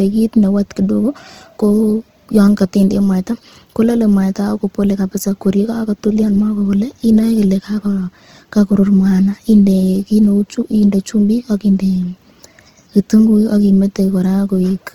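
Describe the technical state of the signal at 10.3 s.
Dropped samples at 10.25 s: a single sharp click marks the point where the waveform jumps from one value straight to a later one. The gap is only a handful of samples, well under a millisecond, so no sound goes missing. The likely cause is a brief break in the sample stream. It shows as a thin vertical line across the whole spectrum, a transient click with no duration.

Opus compression is also present at 10.3 s, as it is throughout the speech. The damage is plainly audible: voiced sounds come across rough, grainy and noisy rather than swirling, because the music-oriented CELT mode keeps each band's energy and fills what it can't code with folded or noise content. The bandwidth stays full. The graininess fits a likely low bitrate around 16 kbps.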